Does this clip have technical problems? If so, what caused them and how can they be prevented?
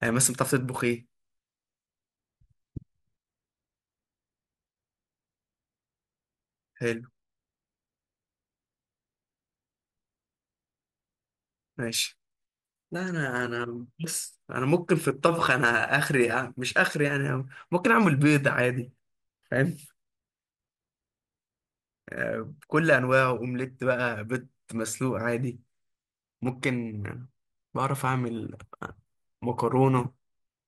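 Yes. MP2 compression damage runs through the whole speech clip: the sound is dull, with a gurgling, granular edge. The likely cause is MPEG Layer II coding at a low bitrate, around 80 kbps, which switches off upper sub-bands and coarsely quantises the rest. Encoding at a higher bitrate or with a more efficient modern codec would prevent it.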